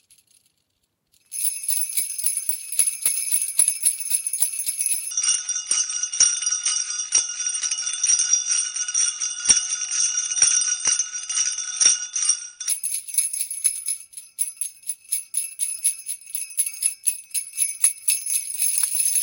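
From 5.11 to 12.69 s the sound drops about ten semitones and drags: a section at the wrong speed, likely played back at 0.56 times its recorded rate.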